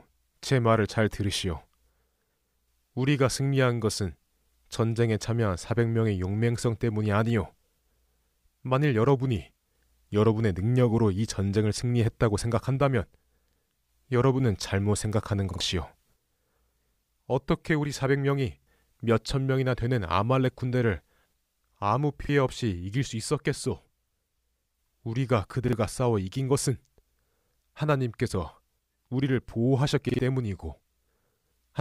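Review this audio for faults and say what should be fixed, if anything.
There's a repeated buffer problem in this speech, six stutters at 13.51, 15.51, 18.62, 22.25, 25.68 and 30.09 s. Each time fresh audio didn't reach the device in time, so it replayed the last chunk, about 46 ms long, which fits a 2048-sample buffer. You hear a quick hard-edged double. At 15.51 and 30.09 s it repeats twice, so those drop about a tenth of a second of speech, and the others lose about half that. To prevent it, give the playback path more headroom, with a deeper queue or higher thread priority, so the next buffer is always ready.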